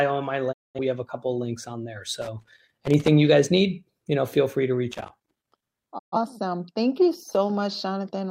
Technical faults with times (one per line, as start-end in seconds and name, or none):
0.51-0.79 digital broadcast dropout
2.22-3.08 loose connector crackle
4.91-5.67 loose connector crackle
5.97-6.16 digital broadcast dropout